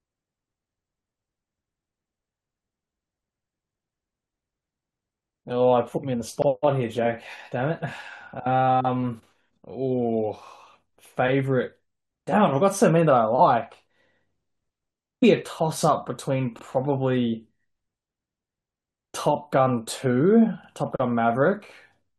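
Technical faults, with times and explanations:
6.42 s, 16.59 s and 20.64 s: overlapping chunks. At each of these points a short stutter is heard in the speech. About 50 ms of audio plays twice. The audio was handled in chunks about 4 s long, and each new chunk began slightly before the previous one ended. That overlap repeats the same 50 ms at the join. The repeat is too brief to hear as an echo. It comes across as a tiny click or hiccup that recurs on the chunk boundaries.
15.22 s: stream segment skipped. The speech suddenly jumps ahead here, with a small blip at the cut. A stretch of the programme is missing, and the sound resumes at a later point. There is no fade or gap, just an abrupt change. The likely cause is a segment of the stream that failed to load. The player then carried on with the next segment. That would explain the hard jump and the brief discontinuity click.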